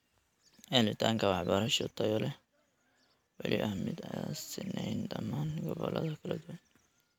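Speech recording with no audible technical faults.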